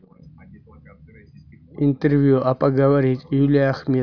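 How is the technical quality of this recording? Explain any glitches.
Nothing in the speech stood out as a technical problem on listening, so there are no glitches to explain.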